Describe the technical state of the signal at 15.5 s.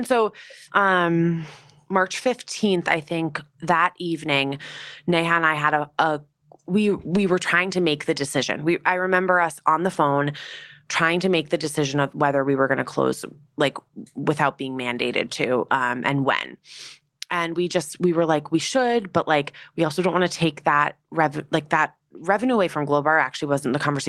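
At 15.5 s the speech signal is intact, with no fault audible at that moment.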